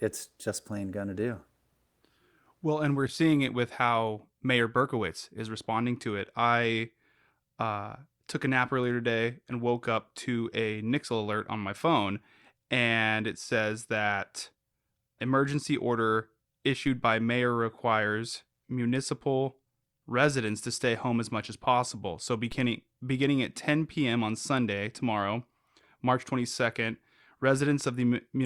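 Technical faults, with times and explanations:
16.87 s and 22.52 s: DC step. A brief low thump lands between "emergency order" and "by mayor requires municipal", and again just before "beginning at". The waveform's zero line jumps by about -32 dBFS, then the offset drains away through a 5 Hz high-pass.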